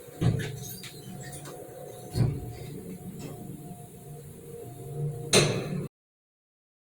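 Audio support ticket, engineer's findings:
Cut-off end at 5.87 s: sound stops mid-event, straight to digital silence for the remaining ~1.1 s. Final buffers likely never written or flushed at stream close. Unlike a dropout, audio never resumes; unlike a fade, no decay tail precedes the silence.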